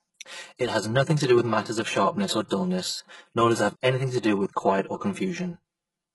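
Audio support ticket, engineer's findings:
Channel delay (comb filtering), throughout: hollow, phasey coloration across the speech. One channel lands roughly 5 ms late and the two sum to mono, cancelling at fixed frequencies. Spectrogram shows static horizontal notch bands, first near 100 Hz, repeating at even spacing upward.

Band-limited, heavily damaged treble, throughout, likely from HE-AAC compression at a low bitrate, which fits around 12 kbps. Upper band is rebuilt from copied lower content, so sibilants turn gritty or lispy. Spectrogram: hard ceiling with nothing above 11.5 kHz, and blocky, repetitive texture in the high band.

Pre-echo, 2.46 to 2.51 s, right after "matters of sharpness or": a short hiss runs ahead of the next attack, about 47 ms long, and the onset sounds smeared. Quantisation noise sized for the loud part fills the quiet lead-in. Waveform/spectrogram: broadband noise smear before the transient.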